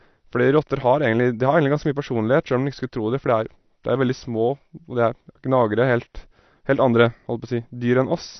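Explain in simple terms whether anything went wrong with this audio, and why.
From start to finish the speech sounds dull and plainly warbly, with nothing above 6 kHz, likely from heavy AAC compression squeezing the file down.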